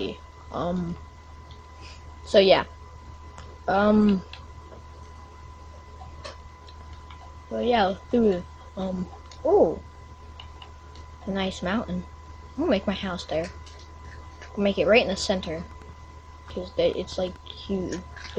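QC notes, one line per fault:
15.45–18.26 s, train of clicks: about ten similar ticks at roughly 3.2 per second, unevenly spaced and about as loud as the audio, likely from equipment interference.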